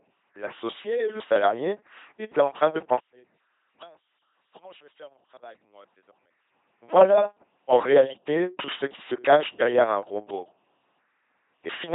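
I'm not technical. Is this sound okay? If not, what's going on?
No. The speech runs through an LPC-10 vocoder from start to finish, so the whole clip has a buzzing, mechanical, robot-like quality. This kind of system doesn't send the actual sound. It sends a rough description of the mouth shape and rebuilds the voice from a steady buzz or a hiss. Each moment must be one or the other, so wrong choices add stray buzz or hiss. Nothing above about 3.8 kHz survives, which makes the audio sound muffled.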